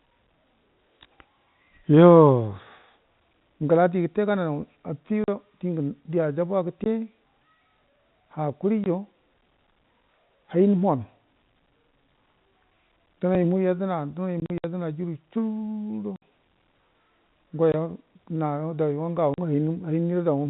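Packet loss filled with silence cuts the speech at 5.24 s (40 ms), 6.84 s and 8.84 s (20 ms each), 14.4–14.64 s (120 ms of scattered gaps, longest 60 ms), 16.16 s (60 ms), 17.72 s (20 ms) and 19.34 s (40 ms). Each gap lasts a multiple of 20 ms, which fits 20 ms packets. They are hard-edged dropouts, seen as flat silent stretches in the waveform and blank vertical bands on a spectrogram.

Overlapping chunks at 8.34 s and 13.35 s replay about 6.5 ms at 5-second joins. This is heard as a click and seen as a vertical line in the spectrogram.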